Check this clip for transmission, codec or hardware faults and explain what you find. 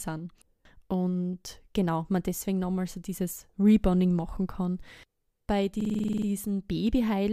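One hardware fault is present, a system hang loop. From 5.81 to 6.27 s the speech freezes into a stutter. A 46 ms slice repeats exactly, ten times, at 21.5 Hz, which fits a 2048-sample ring buffer replayed while the system stalled.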